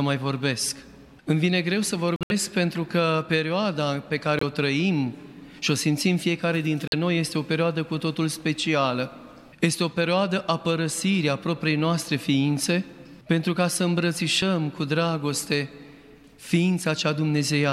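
At 2.16 to 2.32 s, 4.39 to 4.42 s and 6.88 to 6.94 s the audio drops abruptly to dead silence: corrupt frame muted, where damaged compressed frames were rejected and replaced by silence. Unlike concealment there is no smoothed fill, and unlike a dropout-skip the timing stays intact.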